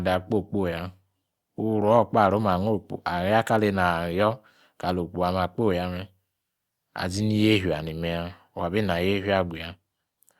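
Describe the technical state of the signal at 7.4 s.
At 7.4 s the speech signal is intact, with no audible fault at that moment.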